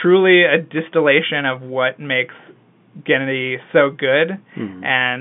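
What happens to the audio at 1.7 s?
Nothing goes wrong at 1.7 s: the speech carries on intact through the narrow telephone band of G.711 coding, with no dropout, click or distortion at that moment.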